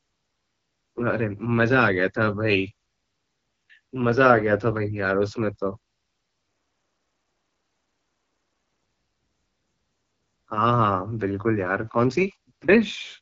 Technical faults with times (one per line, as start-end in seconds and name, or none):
0.00-13.21 AMR wideband (HD Voice) codec